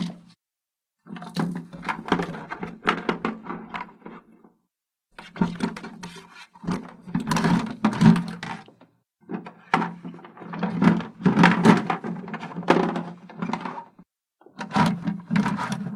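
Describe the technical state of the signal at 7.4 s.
At 7.4 s the audio is inside a call bitrate drop running from 1.97 to 8.89 s. After the bandwidth estimate fell, the encoder went from 96 to 16 kbps for about 4.9 s, coding coarsely and trimming high frequencies, so the sound turns rough, watery or muffled.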